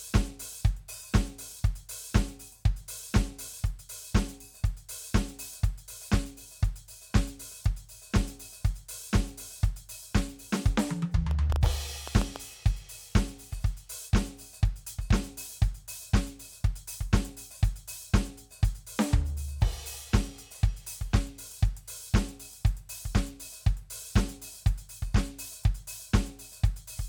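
From 11.31 to 12.37 s a train of clicks sits over the music: about seven near-identical pulses at uneven spacing, averaging 5.7 per second and peaking roughly 10 dB above the signal. The likely cause is interference from nearby equipment or a faulty connection or power supply.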